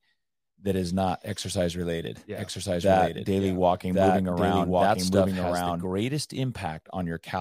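A second, out-of-step copy of the signal likely got mixed in, the kind of thing a slower capture path or a misaligned edit produces. From 2.35 s, just after "is not exercise related", to 5.85 s, the speech carries a doubled audio track: the full-band copy trails the original by about a second, at roughly the same loudness, with no decay or room colour. The two layers overlap confusingly, and the duplicate cuts in and out abruptly.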